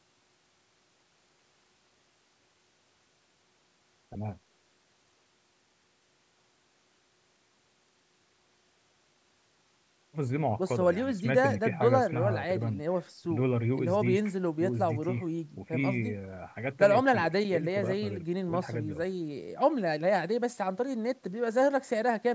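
Nothing here counts as a fault: the speech has simply gone through a call's microphone processing, so the very lowest bass is trimmed off, which is just how that path normally sounds.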